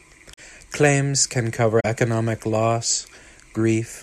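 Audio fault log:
0.34–0.39 s and 1.80–1.85 s, corrupt frame concealed: the speech is disturbed for about 55 ms, consistent with two damaged AAC frames the decoder muted or papered over.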